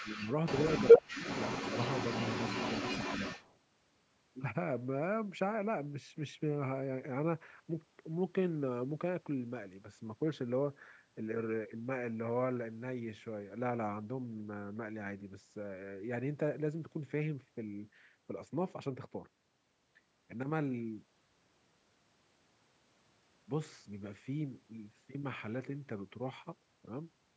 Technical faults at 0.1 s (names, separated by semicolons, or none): speech suppressed in double talk; echo leak